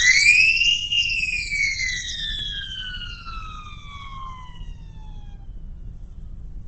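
From the start, the music sounds grainy and rough, with nothing above 8.5 kHz. That points to Opus compression as the likely cause, at a low rate around 16 kbps, where the music mode fills starved bands with noise and folded content, so tones come out coarse rather than clean.

At 2.39 s there's a tiny click from a repeated buffer. A 2.9 ms chunk played twice because fresh audio arrived late, which fits a 128-sample buffer, and a few milliseconds of music were skipped over with a hard join.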